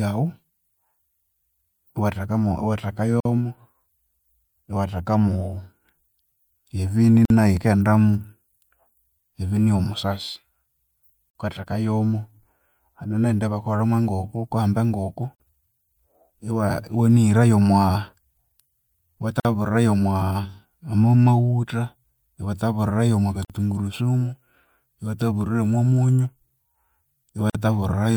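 At 3.20, 7.25, 11.30, 15.35, 19.40, 23.45 and 27.50 seconds, the speech drops out for about 49 ms. Each is a gap at a join of encoded pieces. The gaps recur every 4.0 seconds. That points to separately encoded chunks spliced untrimmed. Each chunk keeps its encoder's leading silence and padded final frame. The result is a brief hole with smeared edges. The speech then resumes exactly where it left off.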